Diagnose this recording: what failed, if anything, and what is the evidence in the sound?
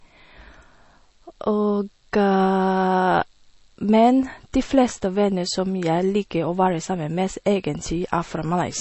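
Codec stage: nothing above 8 kHz and plainly audible damage throughout the speech, likely MP3 compression starved of bits, fitting 32 kbps, which cuts treble.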